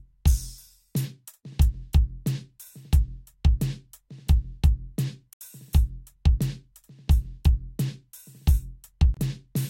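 At 5.33 s the music drops to silence for about 77 ms, resuming at 5.41 s; a shorter 26 ms gap follows from 9.14 to 9.17 s. Both are abrupt cuts with no fade. The likely cause is a Bluetooth stall: radio interference delayed packets, the headphones' playback buffer emptied, and output halted until retransmitted data arrived, after which the music carried on.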